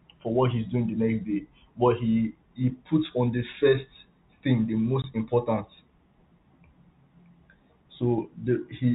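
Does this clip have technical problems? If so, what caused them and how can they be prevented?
Yes, there's one packet loss filled with silence at 5.02 s, right after "the first thing the". A 20 ms hole, consistent with a single dropped packet, cuts the sound with hard edges. Switching on packet loss concealment or adding jitter buffering and FEC would prevent it.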